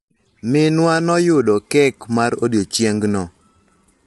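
From start to finish the speech carries plainly audible coding damage, a grainy roughness with noise filling between harmonics, and nothing above 11.7 kHz. This is likely low-delay AAC compression such as AAC-ELD, whose short frames resolve pitch poorly, consistent with about 32 kbps.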